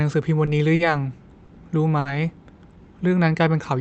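A held smear of the current sound, with a slight buzz or dip, appears at 0.45–0.49 s, 0.75–0.81 s, 1.45–1.49 s and 1.99–2.07 s. These are short stalls from a late packet: the jitter buffer ran dry, so the last sound was stretched 20, 40, 20 and 60 ms before playback resumed with nothing lost.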